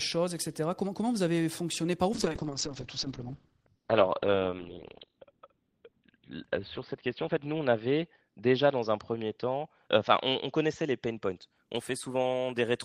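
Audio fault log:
2.14–11.62 s, call bitrate drop: the encoder got far fewer bits, consistent with a fall from 32 to 11 kbps, so speech is coded more coarsely and sounds muffled as bandwidth narrows from 20 kHz to 4 kHz. A spectrogram shows everything above 4 kHz missing for the roughly 4 s at the lowest rate.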